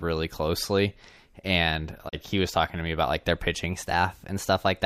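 At 2.08 s the receiver stopped getting usable digital frames and muted its output until good data returned, a digital broadcast dropout. After "closely and", the speech fades out over about 20 ms into a short hole and resumes at 2.15 s with "he was talking to". About 32 ms of the programme is simply gone, which fits a single lost frame. It is heard as a brief clipped gap rather than a click or a repeat.

From 3.70 s, just after "me about like their", playback suddenly runs about 6% fast and stays there to the end of the clip. Speed and pitch rise together by almost exactly a semitone (99.9 cents), so the speech abruptly sounds hurried and slightly higher. The likely cause is a drift correction step, where clock-matching software jumped the playback rate in one go to drain or refill its buffer instead of adjusting it gradually.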